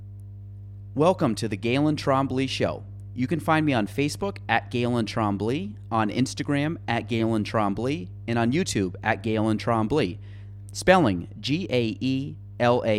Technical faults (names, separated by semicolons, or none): mains hum